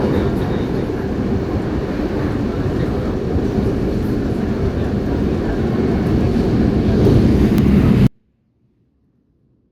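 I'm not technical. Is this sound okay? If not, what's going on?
No. At 8.07 s the sound suddenly drops to near-silence until the end: a 24-bit alignment error (too quiet), where 24-bit samples are read as full 32-bit values, shrinking them enormously.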